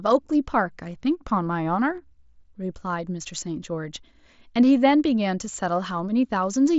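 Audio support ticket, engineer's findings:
Concealed Bluetooth headset packet loss at 0.93 s and 5.98 s. Symptom: a brief smear, barely audible, about 7.5 ms each, one lost frame per event. Component: headset-to-phone radio link on the mSBC path, whose 8 kHz wideband band is audible throughout, with light grain on loud sounds. Mechanism: receiver fills each gap by repeating the closest-matching recent stretch of waveform. Isolated single frames, so no buzzy held tone and no warble on recovery.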